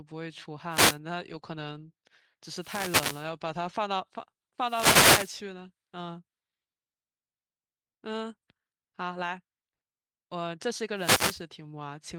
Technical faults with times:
0.70-0.98 wireless microphone noise hit
2.55-3.31 wireless microphone noise hit
4.61-5.41 wireless microphone noise hit
10.95-11.41 wireless microphone noise hit

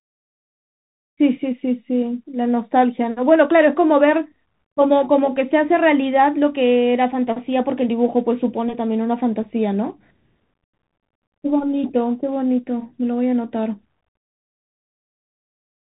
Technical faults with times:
0.00-15.87 Bluetooth CVSD headset codec

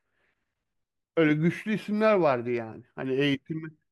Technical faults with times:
none

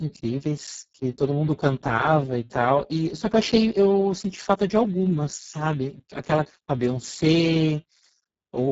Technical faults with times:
0.00-8.71 Speex codec

